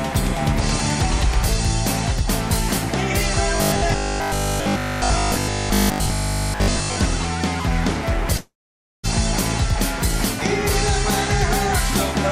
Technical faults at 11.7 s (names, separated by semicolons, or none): none